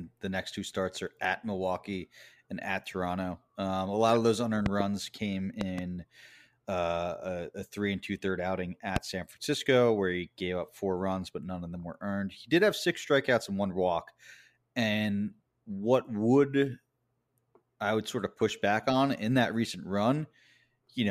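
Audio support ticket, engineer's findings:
Loud pops over the speech: double pops at 4.66–4.82 s and 5.61–5.81 s, a single pop at 8.96–8.99 s, peaking roughly 15–20 dB above the speech. Likely a connector, switch or static transient. Sharp waveform spikes and full-height vertical spectrogram lines; the speech continues underneath.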